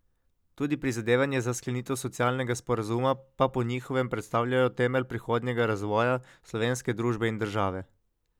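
Nothing stood out as a technical fault on listening to this speech recording.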